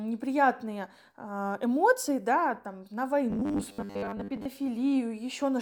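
Speech clip, and right after "эмоции да там на" at 3.30 s it goes robotic until 4.45 s: a rigid 100 Hz buzz, likely from roughly half the audio being replaced by repeated 10 ms buffers.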